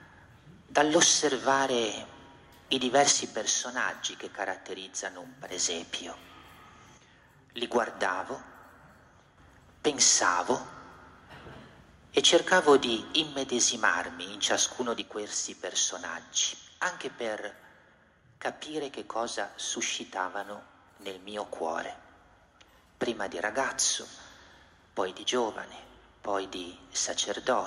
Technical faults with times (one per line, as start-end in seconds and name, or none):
3.12-5.52 one channel drops out
6.98-9.38 one channel drops out
15.01-27.67 one channel drops out